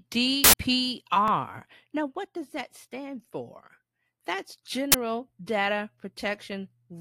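An uninitialised buffer appears twice in this speech recording, at 0.44 to 0.53 s and again at 4.92 to 4.94 s. Each time, playback read a block before any audio had been written into it, so leftover memory came out as a loud burst of digital noise the first time and a loud crack the second. The first burst lasts about 93 ms, which fits a 4096-sample block. The second lasts about 23 ms, consistent with a 1024-sample block. A repeated buffer sits at 1.28 to 1.30 s. Fresh audio failed to arrive in time, so the last 20 ms buffer was played once more. The result is a hard join where the copy restarts, and essentially no audio is lost.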